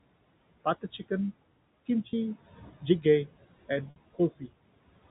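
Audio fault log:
throughout: Noise suppressor artifacts. The room noise sits about 19 dB below the speech. The suppressor pulls it down by about 20 dB between phrases and lets it rise again under the speech. The background level therefore pumps in step with the talking.
2.10 to 2.13 s and 3.90 to 3.96 s: Packet loss with pitch repetition. The first gap lasts 30 ms and the second 60 ms, which points to one lost packet and then two. The receiver repeats the last pitch period to fill each gap. The short one sounds like a held, buzzy tone. The longer one fades to silence, then cross-fades back in.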